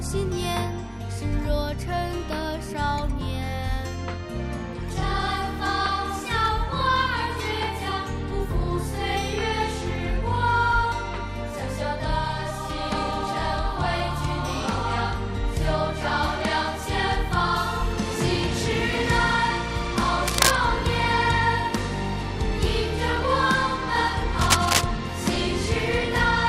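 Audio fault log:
20.21–20.57 s and 24.41–24.83 s, cable scratch noise: a worn cable or connector likely shifted, its contact resistance fluttering, laying dense, uneven scratchy bursts about as loud as the sound.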